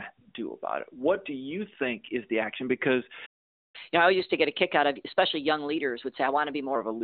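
The player likely ran short of data or was blocked, causing a playback stall from 3.25 to 3.76 s: the speech cuts to silence for about 480 ms mid-flow. To recover lost time, the player then resamples its backlog in a catch-up at higher speed, running at 1.15 times normal from 3.76 to 6.76 s. Over those three seconds the narrowband phone-line speech, with nothing above about 3.6 kHz, sounds hurried and roughly two semitones higher before settling back.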